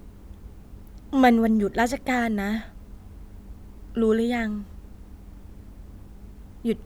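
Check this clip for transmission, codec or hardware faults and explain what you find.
No faults detected.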